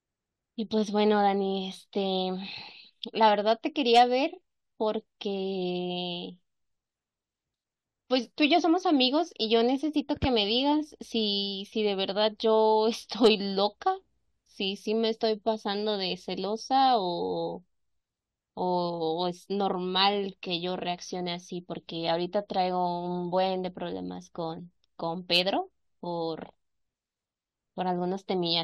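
Hard clipping at 3.95–4.02 s and 13.24–13.28 s: the speech peaks overrun a stage's limit by about 4 dB, so their tops are sliced flat, and the resulting high harmonics come through as a short, gritty crackle on those loud moments.

Damaged data in a compressed stream at 24.58–24.60 s: corrupted bytes cause the decoder to misread frames and lose sync until it finds the next frame header, producing a quick chirp, squawk, click or short hole.

Hard clipping returns at 25.33–25.40 s, with the same overload of about 4 dB and the same brief crackle on the peak.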